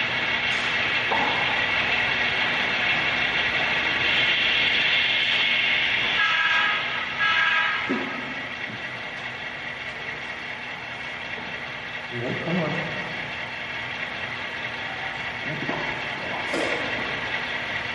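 Gain pumping runs through the whole clip, from start to finish. The level keeps breathing, with the swing on the order of 5 dB. The likely cause is input gain set far too high for the microphone, with a fast limiter or compressor clamping down on every peak. That leaves loud and quiet passages squeezed close together, and the sound feels flattened.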